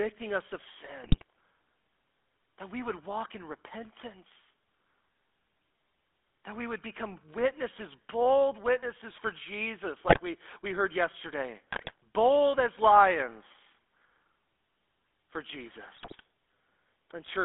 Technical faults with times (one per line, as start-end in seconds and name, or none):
0.00-17.45 GSM full-rate codec
1.04-1.23 GSM bit errors
10.06-10.20 GSM bit errors
11.71-11.92 GSM bit errors
15.96-16.21 GSM bit errors